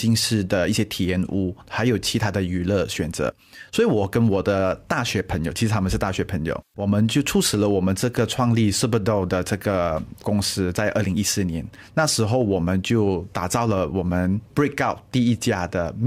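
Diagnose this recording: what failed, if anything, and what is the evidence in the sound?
Nothing in the recording points to a failure at any stage of the chain. There is no event in the sound that calls for a diagnosis.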